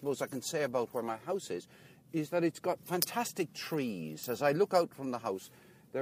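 From 0.40 s to 5.31 s there is a train of clock slip clicks: faint, evenly spaced ticks roughly every one and a half seconds, about five in all. Each is a single-sample discontinuity. The likely cause is two devices running on independent, unsynchronised clocks that differ by something on the order of 20 ppm, so a sample is dropped or repeated each time the accumulated drift reaches one full sample.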